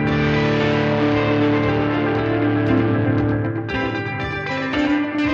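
From start to finish the sound carries a doubled audio track: a second, full-band copy trails the original by around a tenth of a second at roughly 5 dB lower, most likely because the same signal was captured again through a slower path. It sounds like a hard, dry slapback with no decay or room colour. On a waveform each transient has a smaller twin just behind it, and a spectrogram shows every event repeated as a fainter, identical ghost offset in time.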